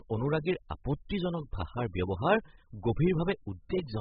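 Heavy AAC compression at a very low bitrate, likely AAC-LC at around 8 kbps, runs through the whole speech clip: the encoder strips everything above 5 kHz and quantises coarsely, leaving the sound dull, smeared and warbling, with fizzy, hollow sibilants.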